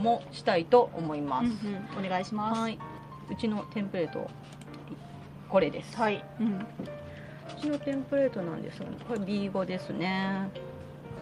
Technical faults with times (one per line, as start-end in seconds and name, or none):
none